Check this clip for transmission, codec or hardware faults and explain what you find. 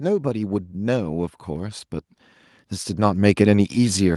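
There are two automatic gain rising faults. From 0.19 to 1.85 s, and again from 2.52 s to the end, the gain control raises its gain. Speech and background swell together, about 6 dB the first time. The slow, shared rise sets it apart from a sudden level jump.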